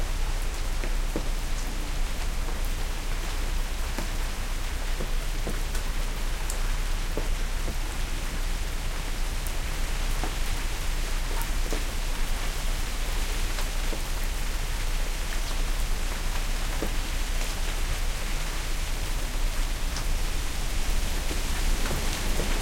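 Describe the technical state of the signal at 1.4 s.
At 1.4 s the signal is intact, with no fault to be heard at that point.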